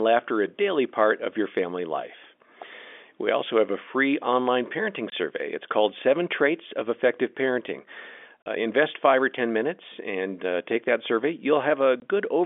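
Three short, hard-edged dropouts cut into the speech, each leaving a clean hole of silence: from 5.10 to 5.12 s, just after "a free online parenting"; from 8.42 to 8.46 s; and from 12.00 to 12.02 s. This is packet loss filled with silence. The 20 ms gaps fit a single lost packet and the 40 ms gap fits two, with the receiver playing silence in their place. The narrow telephone band of the G.711 line stays audible throughout.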